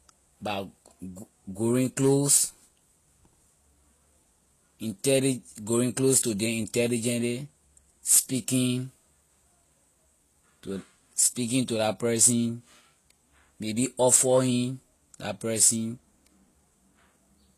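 Transcoding between lossy codecs runs through the whole speech clip, from start to finish. The sound carries two layers of compression damage at once: a smeared, swirly texture on top of a second set of warbling artefacts, which likely comes from a Vorbis encode near 36 kbit/s followed by HE-AAC at about 24 kbit/s. The second encoder wastes bits re-coding the first one's errors, and nothing survives above 19.2 kHz.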